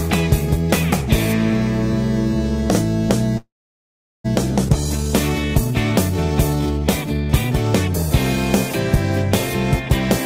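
At 3.37 s the audio stops for 0.89 s, until 4.26 s. Most of that span, 0.76 s, is silence. Nothing is lost; the sound resumes where it broke off. This is a call audio freeze, likely from delayed packets draining the jitter buffer.

At 4.68 s comes a skip ahead. Roughly half a second of audio is gone. The two sides are joined almost directly, with only a tiny fill of about 6 ms. Playback simply jumps forward.

Two jitter buffer slow-downs follow. From 4.97 s to 5.72 s the audio runs at 93% speed, adding 65 ms. From 6.14 s to 7.50 s it runs at 87%, adding 182 ms. Pitch stays the same. The receiver repeats tiny pieces to rebuild its reserve, so sounds drag out.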